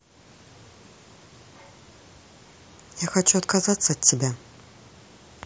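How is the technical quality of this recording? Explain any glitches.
No glitches or faults audible.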